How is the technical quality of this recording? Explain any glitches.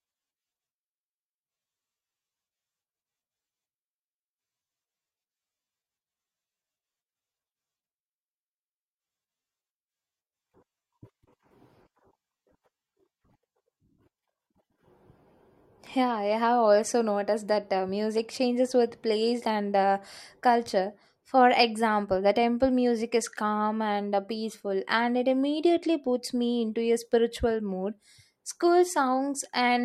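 No glitches turn up anywhere in the recording: the speech signal holds steady and continuous from its opening moment to its last, with nothing breaking into it.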